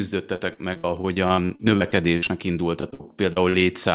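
From 0.36 to 2.29 s and again from 2.81 to 3.63 s there's repeated packet loss: short dropouts, up to 64 ms, patched by stretching the last sound, so the speech goes choppy and robotic. It all sits in a narrowband call sound with nothing above 4 kHz.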